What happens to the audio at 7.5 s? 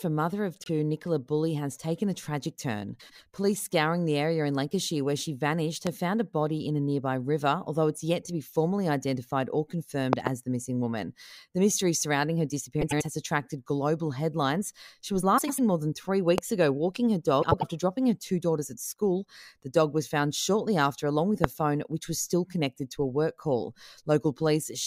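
Nothing goes wrong at 7.5 s: the speech carries on intact through that moment, with no dropout, click, distortion or other fault.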